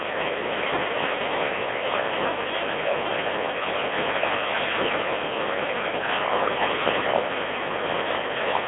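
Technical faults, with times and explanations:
Throughout, Codec 2 vocoder: the speech has that robotic, buzzy quality you get when the decoder rebuilds the voice from sine waves instead of keeping the actual waveform. Only pitch, voicing, energy and a rough spectral envelope survive, and the damage here is heavy, which fits a very low rate around 1.2 kbit/s. The sound sits in a narrow radio band of about 300 Hz to 3.5 kHz, with nothing at all above 3.8 kHz.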